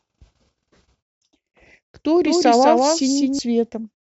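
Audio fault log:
2.25–3.39 s: doubled audio track, a second full-band copy trailing by about 200 ms, roughly 5 dB quieter, likely from a slower capture path; unlike an echo, it carries no decay or room colour and cuts in and out abruptly.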